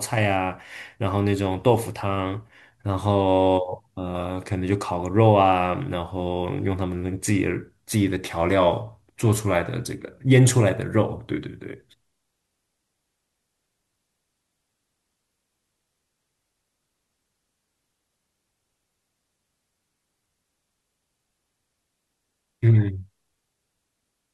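No dropouts, glitches or distortion show up anywhere in this recording; it runs through without a single fault to point to.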